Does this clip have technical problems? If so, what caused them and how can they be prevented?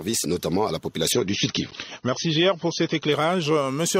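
Yes. From 1.12 to 3.12 s, an adaptive stream at a lower bitrate took over when the connection slowed. The treble abruptly cuts off above 6.3 kHz and codec artefacts rise, with no gap, which fits a step from 96 down to about 27 kbit/s AAC. A steadier connection or a larger playback buffer would prevent the switch.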